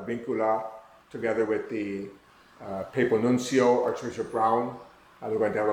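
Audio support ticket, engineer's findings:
No fault found on listening. Nothing to escalate from this sample on the audio side.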